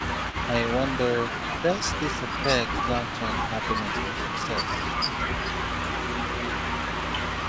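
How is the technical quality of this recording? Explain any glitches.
The big issue is a returning echo through most of the clip, plus a brief dip where both sides overlap.

Echo leak shows up at 0 to 0.47 s, 1.27 to 2.34 s, 2.69 to 3.67 s, 4.15 to 4.47 s and from 4.81 s to the end. A copy of the speech trails about 246 ms behind, sitting about 15 dB down. It's likely a loudspeaker on the far end whose echo canceller let some pickup through.

Speech suppressed in double talk hits between 4.4 and 4.84 s, right where both sides are talking at once. The level sags by roughly 5 dB for about a fifth of a second in total, likely the canceller ducking everything because it couldn't tell the talker from the echo.

The top end stops at 8 kHz, which fits a wideband call path like G.722.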